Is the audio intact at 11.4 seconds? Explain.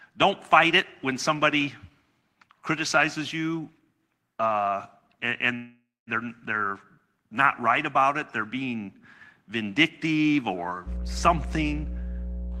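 No. At 11.4 s the speech carries mains hum, a steady 60 Hz tone running from 10.85 s, just after "they're being vindictive or", to the end. A ground loop or nearby transformer leaks the power line into the signal. The hum sits roughly 5 dB below the speech. Unlike rumble or wind noise, it holds one fixed pitch and does not vary.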